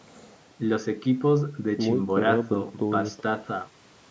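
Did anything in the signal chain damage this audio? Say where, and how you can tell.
No, the signal chain left no damage I can hear.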